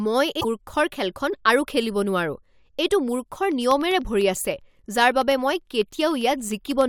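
Speech recording with two distinct faults. From 0.40 to 0.45 s, just before "মূৰ্খৰ খেলখন", the audio jumps ahead and the roughly 50 ms around the join comes out garbled rather than clean. This is likely a broken MP3 bit reservoir: after frames were lost, the next frames reached back for borrowed data and decoded bytes belonging to other frames. The span corresponds to about two 24 ms frames. From 3.52 to 6.81 s there are periodic USB or driver dropouts, roughly 30 of them, spaced exactly 0.1 s apart. Each replaces a sliver of audio, on the order of a tenth of a millisecond, with silence. The result is a regular train of small ticks across the speech, consistent with a background task stalling the bus or audio driver at a fixed 100 ms interval.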